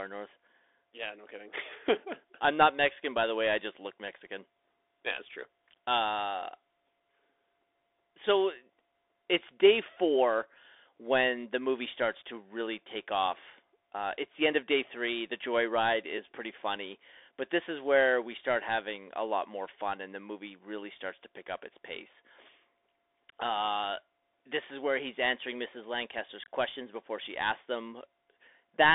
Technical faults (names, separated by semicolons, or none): Bluetooth CVSD headset codec